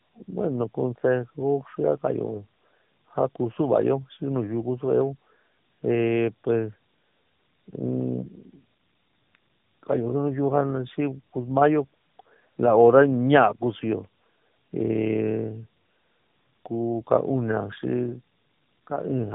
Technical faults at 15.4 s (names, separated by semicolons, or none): tandem speech coding